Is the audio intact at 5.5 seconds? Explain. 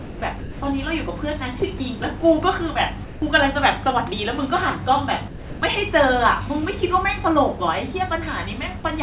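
No. From 5.28 to 5.62 s the speech is dropped by the voice detector: the sender likely mistook it for background and stopped transmitting, and the receiver substituted comfort noise. About 300 ms of speech gives way to steady, featureless noise before resuming.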